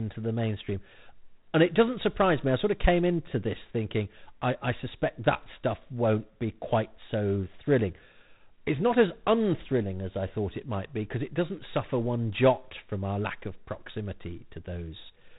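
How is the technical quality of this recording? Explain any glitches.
Not great: the whole thing runs through G.726 ADPCM, and the damage is plainly audible. Throughout, the speech carries a harsh, rasping hiss that rises and falls with its level, which fits coding at 24 kbit/s. Each sample is only a few bits of difference from a predicted value, so the quantisation noise is hefty. Nothing gets through above 3.8 kHz, leaving it dull and phone-like.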